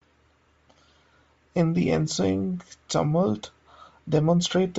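From start to finish the speech carries plainly audible damage of the kind left by Bluetooth LC3 compression, likely the cause here. The upper spectrum sounds stripped and refilled with noise, giving a breathy, grainy edge rather than a clean dull cutoff as a plain low-pass filter would. The smearing sits on a very short time grid, which fits 7.5 ms frames at around 32 kbps.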